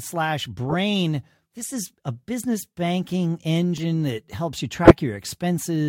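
The speech carries a corrupt frame decoded at 0.67 to 0.74 s: a few damaged compressed frames were played anyway, so energy lands at wrong frequencies and is heard as a fairly loud chirping burst. At 2.44 s, just after "is a", a sharp snap sits on top of the speech, likely an electrical switching spike picked up by the line. More corrupt frames follow at 3.77 to 3.85 s, just before "that helps you", as a quieter blip with about 20 ms of audio skipped, and at 4.83 to 4.91 s, after "that helps you", as a loud squeak.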